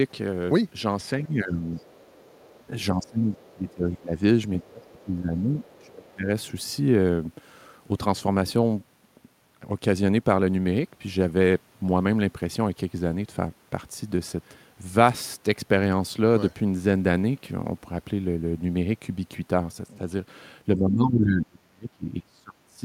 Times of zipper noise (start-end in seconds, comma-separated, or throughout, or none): none